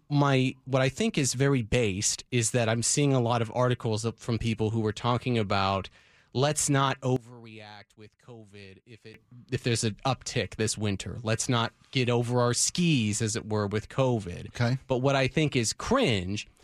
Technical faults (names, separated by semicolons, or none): one channel inverted